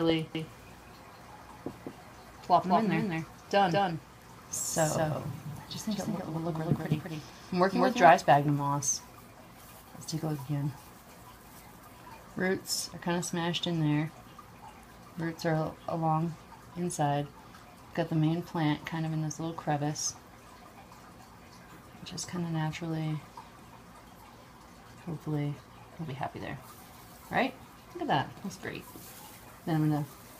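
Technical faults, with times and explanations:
0.35–8.09 s, doubled audio track: a full-band second copy of the sound trails about a fifth of a second behind, roughly 5 dB quieter. It carries no decay or room colour and starts and stops abruptly. Likely a slower second capture path mixed in.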